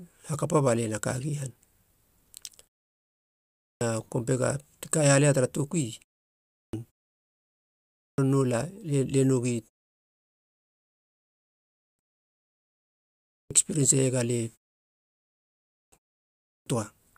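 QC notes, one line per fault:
3.35, 6.27, 7.75, 10.13, 11.56, 13.02, 15.44 and 16.24 s: clipped start after a pause. After each gap of 0.31 to 1.11 s, speech resumes abruptly out of silence with its opening missing, roughly 0.42 to 0.49 s swallowed each time; at 13.02 s the audio cuts in just before "ekspirien seiega alie". The output device drops into sleep during silence and needs nearly half a second to wake and lock again, so the first sounds never reach the listener.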